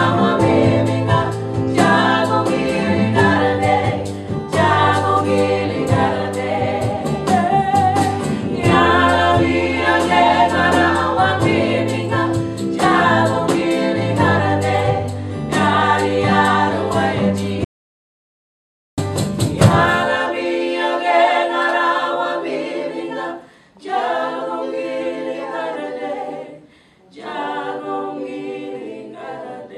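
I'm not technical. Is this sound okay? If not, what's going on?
No. At 17.64 s the sound cuts out to dead silence for about 1.3 seconds, returning at 18.98 s. This audio dropout to silence likely came from a brief input loss.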